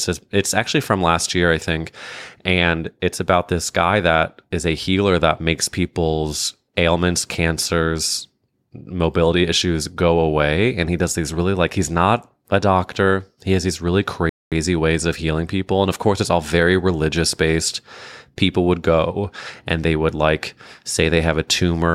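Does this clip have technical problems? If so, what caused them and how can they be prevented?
Yes. At 14.29 s, after "has these really", a rebuffering stall halts the speech: the player ran out of data and waited, adding 0.22 s of silence before "ways of healing people" resumes with nothing lost. The waveform shows a flat gap and the spectrogram a blank vertical band. A larger playback buffer prevents it.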